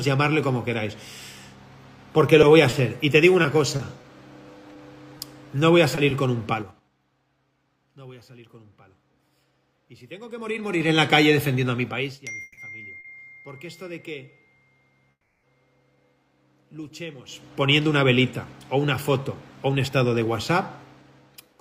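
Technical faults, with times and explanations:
2.41–6.12 s, scattered short gaps: about ten lost or late packets, the longest about 30 ms, were patched by continuing the previous sound, leaving brief ticks and smears.
6.54–6.88 s and 10.29–10.97 s, zipper noise: the level dropped about 20 dB in 5 dB steps, then rose about 20 dB in 3 dB steps. Each step came about ten times per second with no smoothing, so each clicks audibly.
12.42–12.59 s and 15.11–15.45 s, call audio freeze: a drained jitter buffer, likely from delayed packets, stretched the last sound for 150 ms and then 320 ms, the second ending in 50 ms of silence. Playback then resumes where it stopped.
13.00 s, short stall from a late packet: a packet arrived late, so the receiver held the last sound for 40 ms, giving a slight buzzy sustain before continuing.
17.14–20.29 s, jitter buffer speed-up: an overfull jitter buffer was trimmed by cutting about 300 ms in small pieces, so the sound runs hurried at about 110% speed without a pitch change.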